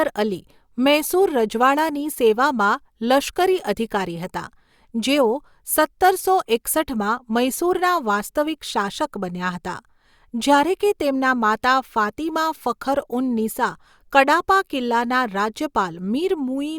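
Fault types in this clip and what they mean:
No faults are audible in this recording.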